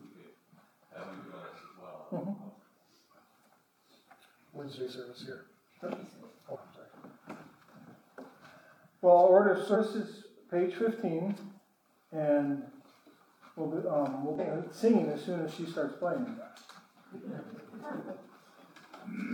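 Damaged data in the compressed stream causes short glitches at 6.51–6.57, 9.71–9.77 and 14.35–14.40 s. Corrupt frames throw the decoder out of sync until it finds the next header.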